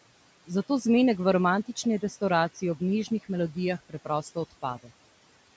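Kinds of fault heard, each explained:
Speech cut by the noise suppressor: the suppressor mistook bits of the speech for background noise and pulled them down along with it. Between 3.89 and 4.64 s, roughly a fifth of a second of speech sounds swallowed, dropping by about 16 dB at worst.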